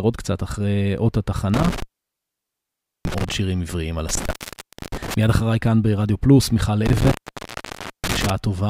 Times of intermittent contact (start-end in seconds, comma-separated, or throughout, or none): 1.54-3.34, 4.09-5.14, 6.86-8.30